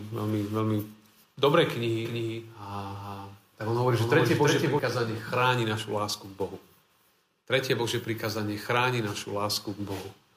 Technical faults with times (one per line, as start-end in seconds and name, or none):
2.05-4.79 doubled audio track